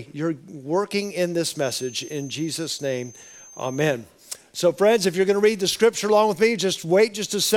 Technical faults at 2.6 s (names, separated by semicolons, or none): feedback whistle